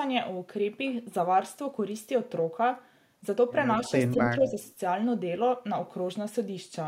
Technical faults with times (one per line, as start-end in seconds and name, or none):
3.85-3.89 echo leak
4.40-4.59 speech suppressed in double talk
4.65-4.73 echo leak